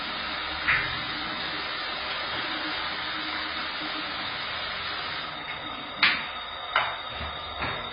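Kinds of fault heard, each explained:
AAC compression: the sound stops dead above 5 kHz and warbles fizzily, likely heavy AAC-LC coding near 16 kbps; a plain low-pass filter would not warble.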